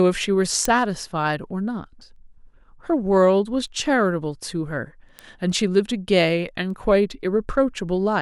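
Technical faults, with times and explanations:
0.65 to 8.21 s, word clock ticks: a run of about seven sharp ticks, roughly every second and a half, with uneven strength. The receiver is free-running against the sender's clock, around 15 ppm apart, so each slip misreads samples and drops or repeats one.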